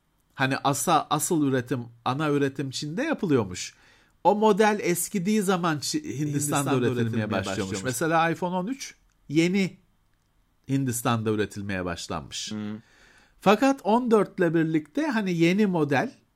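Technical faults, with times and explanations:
6.26–7.92 s, doubled audio track: just after "model eskidiği zaman" the speech is heard twice, a second full-band copy trailing the first by around 150 ms and about 5 dB quieter. The copy has no decay or room colour, so it reads as a clean slapback rather than an echo, and it switches in and out abruptly at both ends. The likely cause is the same signal reaching the mix a second time through a slower path.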